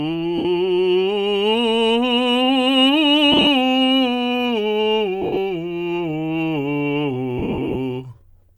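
Music, affected by lost LE Audio frames. Bluetooth LE Audio frames dropped at 0.38–0.45 s, 3.32–3.47 s, 5.22–5.37 s and 7.38–7.76 s, and the LC3 decoder filled each gap by reusing the last spectrum with randomised signs. Tones blur into a brief noisy smear, and the last three losses break up into several short gaps.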